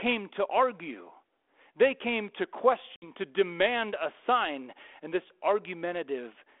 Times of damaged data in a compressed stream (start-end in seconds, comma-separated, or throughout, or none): none